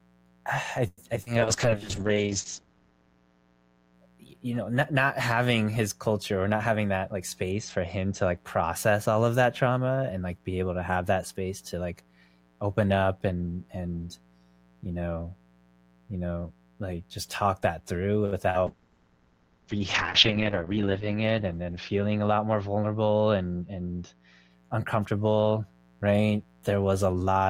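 A dimmer, rectifier or missing shield lets in sharp spikes locked to the 60 Hz mains throughout. This leaves a steady, raspy mains buzz rich in harmonics under the speech, sitting about 35 dB below it.

From 0.87 to 1.00 s, packets were likely held up in transit and the jitter buffer ran dry. This call audio freeze stretches the last sound into a fading buzz that drops to silence briefly before the speech resumes where it left off, about 0.1 s later.

Packets then failed to reach the decoder in time just after "I I", at 1.16 to 1.19 s, and again at 1.23 to 1.34 s. This short concealed packet loss is patched by extending the preceding sound, heard as a quick smear and wobble.

At 1.40 s the bandwidth estimate collapses, and the encoder falls from 32 to 7 kbps, with its audio band narrowing from 20 kHz to 8 kHz. This call bitrate drop leaves the speech muffled and watery until 4.24 s, just before "know not not having".

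Between 6.43 and 7.21 s the jitter buffer holds surplus audio, and the receiver trims roughly a tenth of a second in small pitch-period pieces. This jitter buffer speed-up plays the speech about 13% faster at unchanged pitch, so it sounds hurried.

Another concealed loss at 18.50 to 18.57 s produces a brief smeared wobble.

Right after "just talk that through", a second call bitrate drop begins at 18.67 s, again from 32 to 7 kbps with the band cut to 8 kHz. The sound stays dull and rough until 24.57 s, at "uncomfortable right".

Inside that stretch, from 20.32 to 20.78 s, a second speed-up removes about 50 ms and runs the speech roughly 11% fast.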